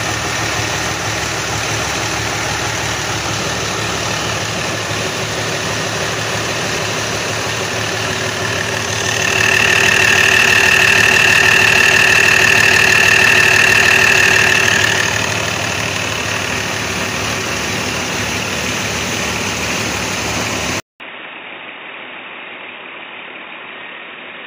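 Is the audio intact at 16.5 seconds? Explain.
Yes, at 16.5 seconds the audio runs on cleanly with no dropout, click, distortion or other fault to be heard.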